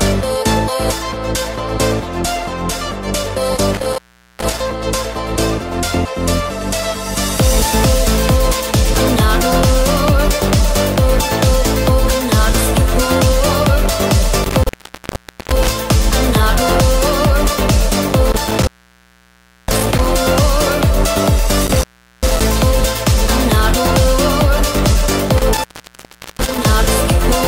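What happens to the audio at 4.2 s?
At 4.2 s the sound drops out abruptly, with a burst of crackle at the edges of the gap and only faint hiss left underneath. This is an intermittent contact, spanning roughly 3.73 to 4.60 s, with the signal path open for about 0.41 s of that stretch. A loose cable or plug briefly loses connection, so the audio cuts away, and the scraping of the contact as it opens and recloses produces the crackle around the silence.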